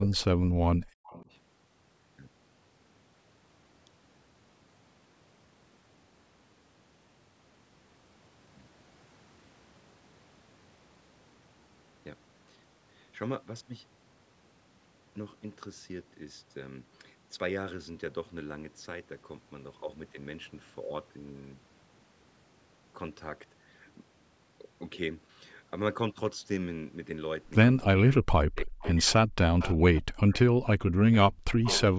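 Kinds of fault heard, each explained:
Speech suppressed in double talk: the speech ducks by about 40 dB in chunks at the start and again near the end, likely the echo canceller clamping down during overlapping talk.
Echo leak: faint delayed copies of the speech sneak through about 0.28 to 0.35 s late, around 15 to 30 dB down, likely loudspeaker pickup the canceller missed.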